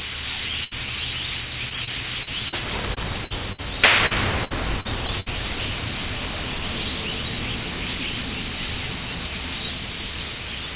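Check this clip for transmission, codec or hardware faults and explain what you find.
The clip of everyday sound shows three kinds of network packet loss, heard through a call path whose band stops at 4 kHz, which fits G.711 A-law at 64 kbps.

Burst of packet loss at 0.64 to 0.88 s, 3.24 to 3.32 s and 3.52 to 3.60 s. Consecutive packets were lost or arrived too late, so the receiver extended the last sound and faded it. The first gap lost about 80 ms and the later two about 60 ms each. Each is heard as a held, dimming buzz or hiss, after which the sound jumps ahead with a piece missing.

Repeated packet loss (robotic sound) from 1.69 to 2.54 s and from 4.06 to 5.28 s. Packets kept failing to arrive, with four gaps in the first stretch (longest 40 ms) and five in the second (longest 59 ms). Concealment covers about 13% and 18% of these spans. Each hole is patched by continuing the previous sound before the next one arrives, giving a choppy stutter with fragments lost.

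Short concealed packet loss at 2.94 to 2.98 s. About 20 ms of audio missed the decoder, and the receiver bridged it by continuing the preceding sound and blending back in. The result is a brief smear or wobble rather than an audible gap.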